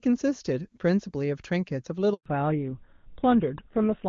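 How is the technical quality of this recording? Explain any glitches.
The recording has two linked glitches, both at the same moment in the call.

Handover gap, 2.14 to 2.26 s. The sound cuts out for 120 ms. The phone was switching the call between networks. No speech frames arrived during the switch. The voice fades fast, leaves silence, and that speech is lost.

Fallback to narrowband, 2.26 s to the end. The clear HD Voice sound of the first half is gone. Nothing above 4 kHz remains. The speech turns duller and rougher. The new link dropped to an older narrowband codec, which fits GSM full rate.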